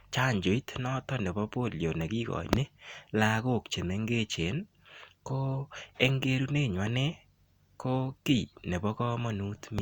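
A speech recording, with nothing technically wrong to report.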